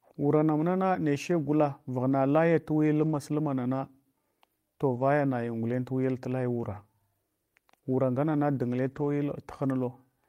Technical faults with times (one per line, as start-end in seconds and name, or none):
2.11-2.13 lost packet rebuilt from error correction
3.01-3.15 lost packet rebuilt from error correction
4.95-5.01 lost packet rebuilt from error correction
6.71-6.77 lost packet rebuilt from error correction
8.87-9.05 lost packet rebuilt from error correction